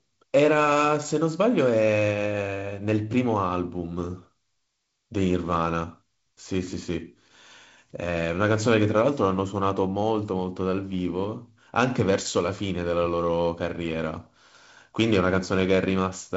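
No faults can be heard anywhere in this speech.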